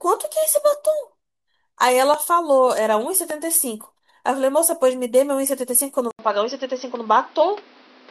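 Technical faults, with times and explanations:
2.14–2.16 s and 3.30–3.33 s, loud pop: two single sharp pops land on top of the speech, which continues underneath. The second is stronger, about 10 dB above the speech against about 5 dB for the first. Each is likely a brief voltage pulse from a plug, switch, static discharge or driver glitch, shaped by the circuitry that follows.
6.11 s to the end, input switched to a poorer device: after a silence of about 80 ms the speech turns dull, with nothing above 6 kHz. A new noise floor appears about 30 dB below the speech, with little change in level. This fits the recording likely moving to a narrower-band microphone or a headset call profile.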